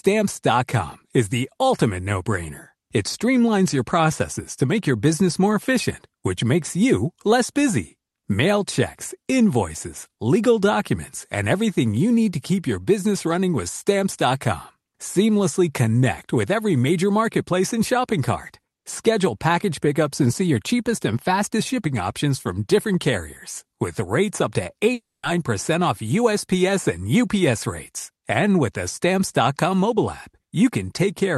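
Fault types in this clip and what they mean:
Long network dropout: At 24.93 s the audio breaks off and the receiver keeps extending the last sound as a buzzy, fading tail for roughly 0.3 s. Near-silence follows for about 0.22 s before the audio resumes at 25.25 s, with about 300 ms of content gone rather than delayed. This is likely a stretch where packets stopped arriving over the call path, whose Opus coding keeps the band under about 12 kHz.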